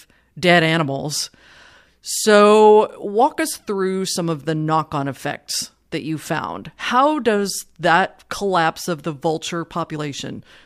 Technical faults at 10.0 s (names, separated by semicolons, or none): compressed frames skipped